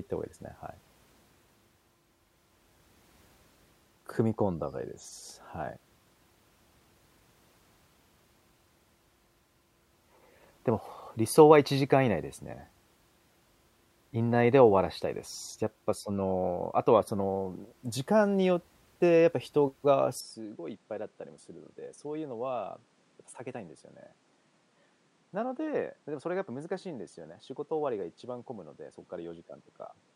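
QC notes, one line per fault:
20.20–30.15 s, input switched to a poorer device: level falls about 10 dB, nothing above 10.5 kHz, a faint new noise floor, no gap. Likely a device change, not plain filtering.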